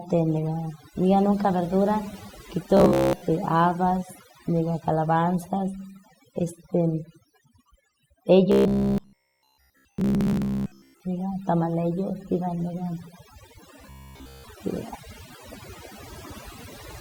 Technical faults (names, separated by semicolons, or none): overdone noise removal; robotic sound from repeated short buffers